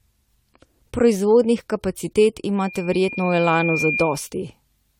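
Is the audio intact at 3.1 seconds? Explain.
No. At 3.1 s a loudspeaker feedback squeal is under way, running from 2.58 s to 4.30 s. The microphone is picking up its own loudspeaker, and loop gain exceeds unity at 2.4 kHz, so that single tone swells over about a second and a half until it sits roughly level with the speech.

The speech at that moment also sounds swirly, smeared and hollow, with softened attacks and nothing above 18.5 kHz. The likely cause is generation loss: repeated lossy re-encoding, with the sound fitting around seven passes through AAC-LC at 96 kbit/s.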